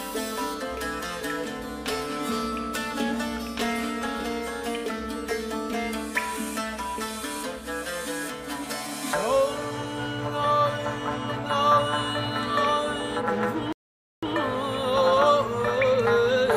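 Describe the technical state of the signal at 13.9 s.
At 13.9 s the player is in a rebuffering stall, running from 13.73 to 14.23 s. Playback had used up all the downloaded audio and halted until more data arrived. The sound drops abruptly into silence for about half a second (0.50 s of added time), then picks up at exactly the point where it stopped. No audio is skipped or lost; the gap simply pushes everything after it later.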